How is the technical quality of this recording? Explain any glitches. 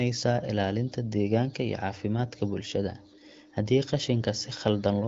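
No glitches can be heard in this speech recording. It has the sound of an AMR wideband (HD Voice) call, with nothing above 7.5 kHz and only light coding texture, which fits a higher rate such as 15.85 kbit/s.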